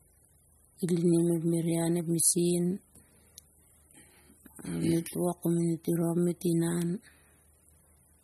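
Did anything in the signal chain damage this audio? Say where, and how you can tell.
Yes. Codec damage runs throughout the speech clip and is plainly audible, likely from MP3 compression at a bitrate that fits about 32 kbps. Nothing survives above 12.5 kHz, where the bit-starved encoder cut the treble, and it discarded weak frequency lines frame by frame.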